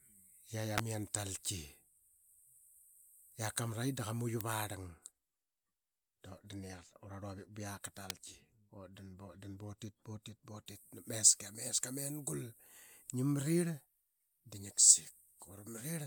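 Three sharp snaps land on top of the speech, at 0.78 s, 4.41 s and 8.10 s, each over within about 20 milliseconds and peaking somewhere around -15 dBFS. They sound like an electrical switching spike, most likely a nearby switch, motor or static discharge arcing briefly and the audio line catching that burst. The first is a touch longer than the later two.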